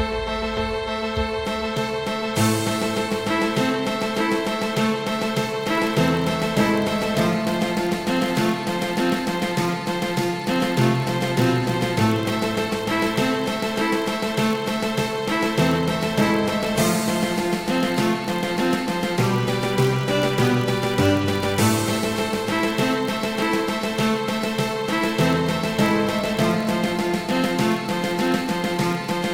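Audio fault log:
5.43 to 29.33 s, block size mismatch (padded): a steady low buzz at about 43.1 Hz rides under the sound from 5.43 s to the end, with the pace only fractionally slower (0.999 times normal speed). One stage hands over blocks slightly shorter than the next stage reads, so a brief stretch of zeros fills the tail of every block. Those repeated tiny gaps produce the buzz at the block rate, which fits a 1024-sample read size.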